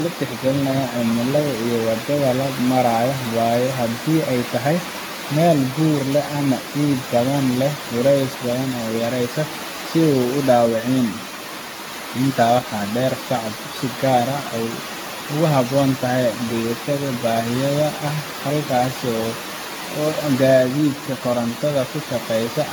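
Throughout the speech, generation loss is likely from repeated AAC-LC encoding, roughly seven passes at what sounds like 96 kbit/s. Each pass quantises on a shifted frame grid, so noise and spectral holes accumulate: a swirly, hollow tone, smeared attacks, nothing above 18.6 kHz.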